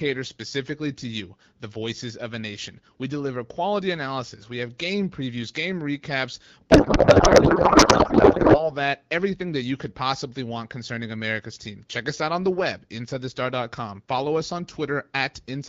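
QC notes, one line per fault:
6.71–8.71 s, codec payload misread: right after "game previews game recaps" the speech gives way to garbled noise and warble that barely tracks it, until "that everything that you" returns clean. The pattern fits octet-aligned AMR frames being unpacked as bandwidth-efficient ones, with every field shifted. Packet loss would bring brief gaps or smeared repeats. Here the decoder keeps producing confident, wrong sound for the whole two seconds, unlike the clear AMR-WB at 12.65 kbit/s around it.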